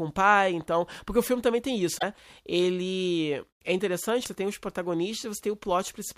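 At 1.97 to 2.03 s, after "o filme também tem", damaged data in the compressed stream breaks through as a short glitch. Corrupted bytes make the decoder misread frames and lose sync. The same fault recurs at 4.22 to 4.28 s, just before "tem os".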